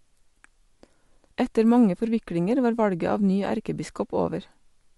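From the start to the end of this speech, the sound carries plainly audible Bluetooth LC3 compression. A grainy, breathy edge rides over the voice. The upper band sounds thinned and noise-filled. This fits a 48 kbps stream in 10 ms frames, likely from an LE Audio link.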